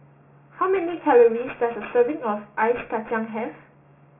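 Aliasing runs throughout the clip. The speech was resampled from 16 kHz down to 6 kHz with no low-pass filter, so content above 3 kHz folds back below it, sitting around 20 dB under the speech and making sibilants gritty and metallic.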